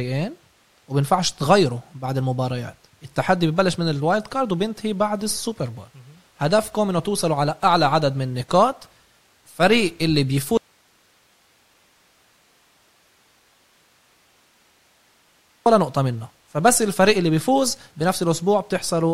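A speech recording with one clear fault: an audio dropout to a faint residue running from 10.57 s to 15.66 s, so about 5.1 s of the talker simply gone. The cut is abrupt at both ends, nothing like a natural pause, and the gap holds only hiss, roughly 40 dB below the speech level. The signal was likely lost upstream while the rest of the chain stayed live, passing its own noise floor through.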